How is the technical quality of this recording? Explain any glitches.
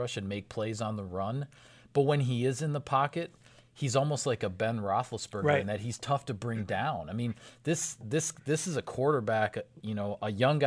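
No technical faults can be heard in this recording.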